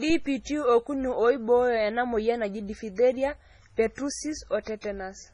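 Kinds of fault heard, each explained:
MP3 compression: treble stops at 10.3 kHz and weak frequency lines flicker, giving heavy watery swirl throughout; likely a bit-starved encoder, fitting roughly 24 kbps.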